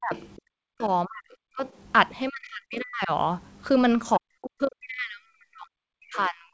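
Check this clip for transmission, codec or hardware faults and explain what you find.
The main problem is speech suppressed in double talk, plus a short stretch of the other side's voice leaking through.

Speech suppressed in double talk happens five times: 0 to 0.14 s, 0.36 to 0.84 s, 1.05 to 1.62 s, 2.29 to 3.11 s, and from 4.17 s to the end. In each stretch the talker's level collapses, by roughly 40 dB at its deepest, so the speech drops away or breaks into fragments. The likely cause is that both ends were talking at once and the echo canceller couldn't separate the near talker from the loudspeaker echo, so it ducked everything.

The other side's voice leaking through shows up between 0.15 and 0.29 s, where a faint second voice sits about 25 dB below the talker. It's brief and low. The likely cause is that the echo canceller didn't fully remove the far end playing on the device's loudspeaker, so some of that sound got back into the microphone feed. 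It lands right between the first two suppression dips.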